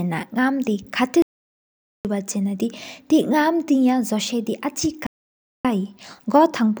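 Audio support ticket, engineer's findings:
Audio dropout to silence, 1.22–2.05 s: speech cuts out abruptly, about 0.83 s lost, no room tone. Likely input device disconnect or failed link, encoder writing silence. Waveform: flat, near-silent line. Spectrogram: fully blank column, hard vertical edges.

Playback stall, 5.07–5.65 s: speech halts mid-flow for about 0.58 s, then resumes. Likely player buffer underrun or blocked playback thread. Waveform: flat gap, abrupt stop and restart. Spectrogram: empty vertical band with sharp edges.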